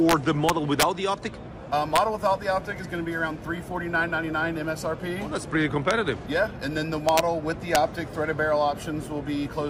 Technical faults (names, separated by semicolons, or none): integer overflow